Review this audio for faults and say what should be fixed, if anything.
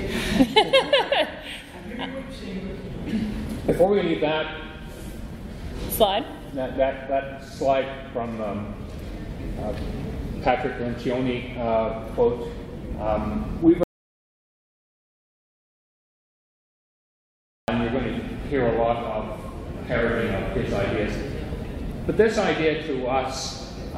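An audio dropout to silence runs from 13.83 s to 17.68 s. For about 3.85 s the sound breaks off mid-flow and returns abruptly. Unlike a noise gate or a quiet passage, the gap holds no room tone at all, only silence, which points to a likely loss of the input while recording carried on. Securing cables and connections and watching input meters throughout the session would catch a lost feed as soon as it happens.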